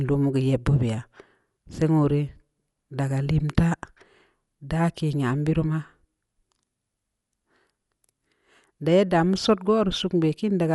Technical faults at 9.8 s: Dolby Digital compression

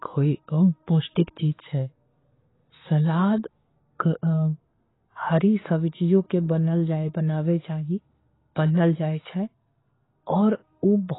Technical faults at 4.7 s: AAC compression

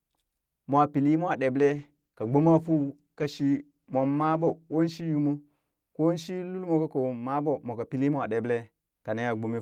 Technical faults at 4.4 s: call bitrate drop

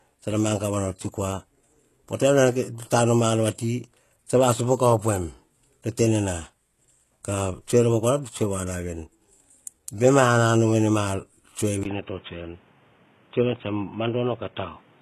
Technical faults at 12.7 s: HE-AAC compression; input switched to a poorer device

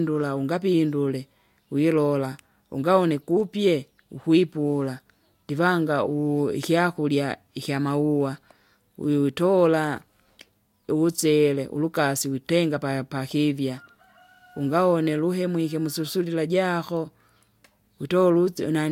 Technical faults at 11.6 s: none

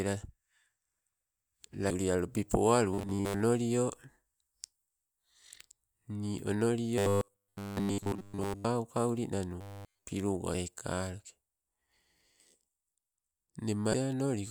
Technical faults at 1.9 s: damaged data in a compressed stream

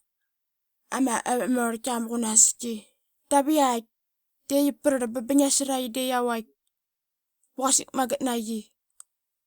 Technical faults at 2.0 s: none

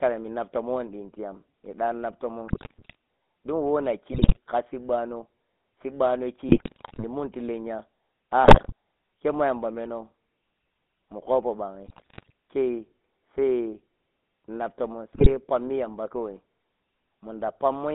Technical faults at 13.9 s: GSM full-rate codec

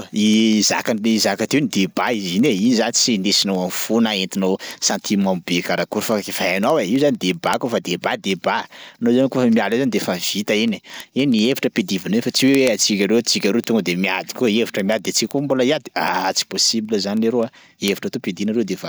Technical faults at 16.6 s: word clock ticks

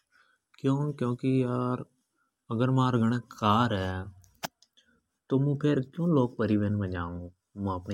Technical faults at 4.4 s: none

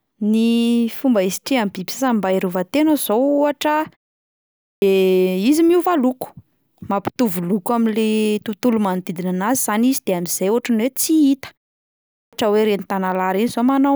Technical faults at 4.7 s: clipped start after a pause

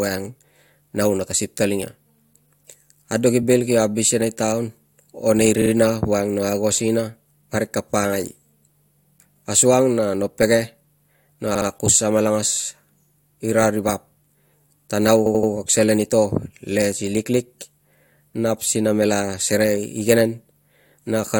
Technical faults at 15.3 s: repeated frames

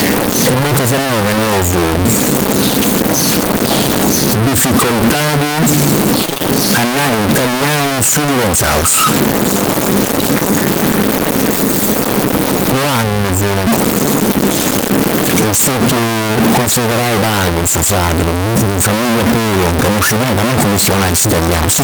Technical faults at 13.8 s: stuck bit

